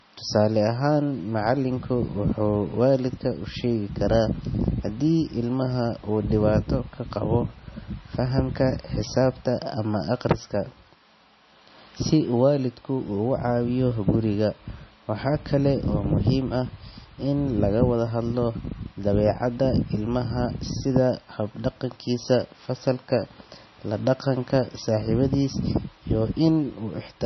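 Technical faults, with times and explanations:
Throughout, low-bitrate audio saved at a high bitrate: dull speech with nothing above 5.9 kHz, pointing to a likely 24.6 kbit/s MP3 re-encoded at 320 kbit/s.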